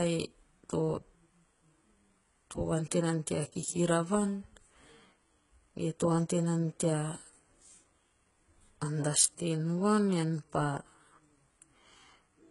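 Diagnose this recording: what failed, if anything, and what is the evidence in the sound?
HE-AAC compression, present throughout the speech. The fault sits at the codec stage. Nothing reaches above 11.1 kHz, and the top octave sounds synthetic rather than natural. The s sounds come out gritty and lispy, and the high band has a metallic sheen that doesn't follow the voice's harmonics. This fits heavy damage from a parametric codec at a very low rate, around 12 kbps, likely HE-AAC v2. It coded only the lower spectrum and rebuilt the treble by copying lower bands upward under a coarse envelope.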